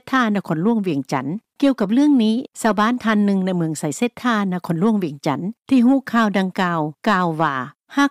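No technical faults are audible anywhere in the audio.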